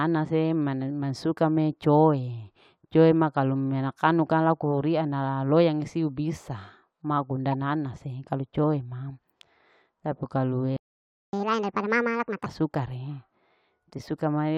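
At 7.52 to 7.54 s, between "siu bisa ma kunda" and "nanase kalu coe ma", a short squeaky blip cuts across the speech, peaking at about -25 dBFS. This is a corrupt frame decoded. Flipped bits inside the compressed data led the decoder to apply wrong gains or misread spectral codes, and it played the result anyway, scattering energy into frequencies where none belonged. The blip lasts only as long as the damage, which fits a couple of frames.

Right after "tapi kalu e", at 10.77 s, the speech stops dead mid-flow and the output is silent for about 0.57 s, until 11.33 s. This is a playback stall. The audio doesn't fade or trail off. It simply halts and then resumes, which is what happens when the player is starved of data or its thread is held up. Most likely, the incoming stream briefly failed to keep the buffer filled.

From 11.33 to 12.46 s, leading into "suka re", the speech comes back noticeably rushed and raised in pitch, by about seven semitones, giving a chipmunk-like quality. 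This is catch-up at higher speed. The player works through its backlog at 1.5 times normal speed by resampling, so pitch climbs along with tempo until the lost time is made up. After 12.46 s, playback drops back to normal speed.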